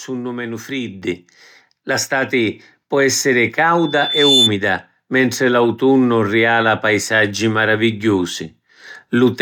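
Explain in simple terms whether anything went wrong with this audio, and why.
Microphone volume stepped up, at 1.02 s: the recording suddenly gets louder in a single jump, with the voice and the background noise rising together. The calling software judged the microphone too quiet and turned its input volume up in one step instead of gradually. Because it changes the microphone itself, everything the microphone hears gets louder at once, which is why the room sound jumps along with the speech.

Loudspeaker feedback squeal, from 3.78 to 4.52 s, just after "stati pò essiri": a high, piercing tone near 3.5 kHz appears and swells over about half a second until it is louder than the speech. The microphone was picking up the loudspeaker it was feeding, so that pitch went around the loop again and again, growing stronger each time. It kept building into a squeal until it stopped at 4.52 s.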